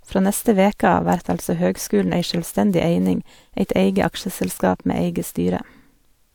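No technical faults can be heard anywhere in the recording, and the signal stays continuous and intact throughout.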